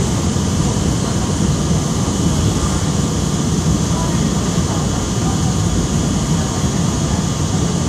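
Sound, likely transcoded between lossy codecs, MP3 then WMA, so mixed artefacts from both stack up throughout and nothing survives above 14.9 kHz.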